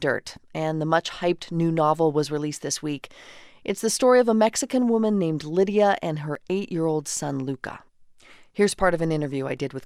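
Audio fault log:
6.35 s, overlap between stream segments: right between "and her" and "eight year old son" there's a tiny skip where a sliver of the speech, about 8 ms, just drops out. Two adjoining chunks of the stream claimed the same stretch of time, so the player trimmed the overlap even though that audio wasn't actually duplicated. The waveform jumps across the gap, giving that small skip; its spot near the 6 s mark fits a segment boundary.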